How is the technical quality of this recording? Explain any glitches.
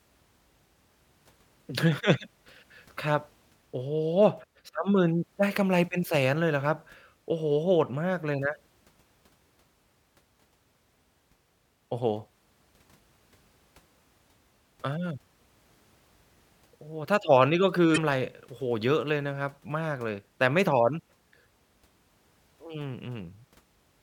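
One glitch in this speech recording, from 17.93 to 17.98 s: damaged data in a compressed stream. Corrupted bytes there make the decoder misread the frames, lose sync and hunt for the next valid frame header, so the speech gives way to a brief chirp, squawk, click or short hole lasting about 40 ms.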